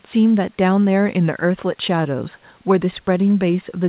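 Nothing goes wrong anywhere in this speech recording; it simply has the narrow, phone-line sound of a G.711 call path, with nothing above 4 kHz, which is just how that route sounds.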